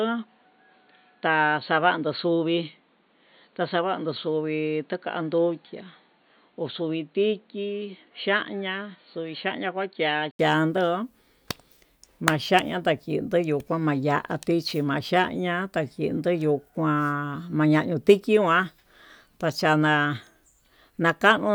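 From the very start up to 10.39 s the speech sounds dull and a bit boxy, with nothing above 4.5 kHz, a faint background noise well under the voice and the level about 5 dB lower. Then an 80 ms gap, and it opens right up. That's the classic input switched to a poorer device pattern: the recording likely began on a narrower-band mic or headset profile before the system moved to the better input.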